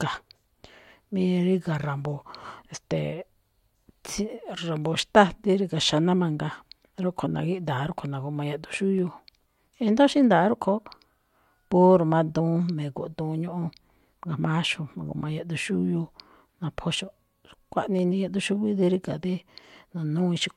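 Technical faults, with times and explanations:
0.98 to 19.99 s: periodic USB or driver dropouts. Once a second, a tiny sliver of speech is skipped. Each jump clicks, audible only while sound plays.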